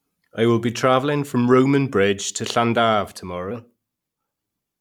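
Section at the wrong speed from 3.51 s to the end: speech runs 1.15 times fast, pitch up about two semitones, likely a mismatched clock.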